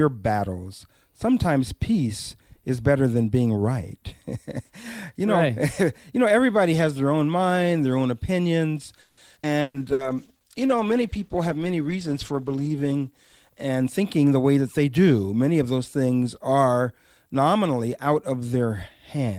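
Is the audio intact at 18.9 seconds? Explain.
Yes, at 18.9 seconds the speech plays through intact, with no dropout, click, distortion or other fault at that moment.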